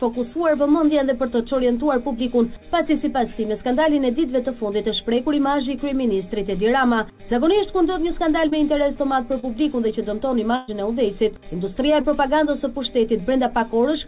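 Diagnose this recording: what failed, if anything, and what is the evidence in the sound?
The network dropped packets here, and the receiver's concealment covered the holes. It's short concealed packet loss, four times: 3.84 to 3.87 s, 8.49 to 8.53 s, 9.39 to 9.57 s, and 12.02 to 12.05 s. Each is a brief smear or wobble where about 20 ms of audio never arrived, consistent with single lost 20 ms packets. The decoder extended the last sound to fill the gap, then crossfaded back into the real signal.

At 10.56 to 10.70 s there's a burst of packet loss, with about 120 ms missing in one go, which fits several 20 ms packets lost back to back. Concealment stretched the preceding sound across the whole gap, so you hear it hang and fade as a buzz or hiss rather than drop to silence. Then the audio picks up further along, with that slice gone. The call path's band limit is audible too: nothing above 4 kHz, pointing to G.711 mu-law at 64 kbps.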